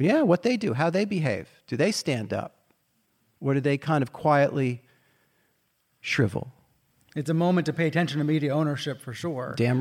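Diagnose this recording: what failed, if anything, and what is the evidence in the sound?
Nothing failed; no faults heard.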